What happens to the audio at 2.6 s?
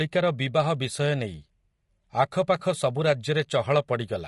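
Right around 2.59 to 2.62 s there's an AAC frame loss with concealment. A chunk of coded audio, about 20 ms and consistent with a single lost frame, never arrived. The decoder papered over the gap by reusing the last good spectrum with its fine detail scrambled. Because the gap is so short, it doesn't drop out. You get a brief smeared, noisy, phasey blip before normal decoding picks up again.

Under that blip, and across the whole clip, the speech has the rough, grainy texture of low-delay AAC compression, most likely AAC-ELD at a low rate, somewhere around 32 kbps. At that low bitrate, noise fills the gaps between the voice's harmonics and the top end sounds thin or synthetic. The codec damage is plainly audible.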